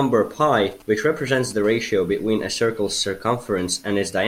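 From 0.57 to 1.53 s, GSM signalling bursts break in: a galloping dit-dit-dit of short 217 Hz buzzes, roughly 25 dB under the speech, as a nearby 2G phone's intermittent radio pulses get rectified by the audio circuitry. A spectrogram shows clustered vertical striations with short harmonic combs.

From 1.64 to 2.80 s comes a GSM phone buzz, a steady, raspy 217 Hz drone about 35 dB below the speech. Continuous call-mode bursting is being rectified. A spectrogram shows horizontal lines at every 217 Hz multiple into the kHz range, and the waveform shows regular spikes roughly 4.6 ms apart.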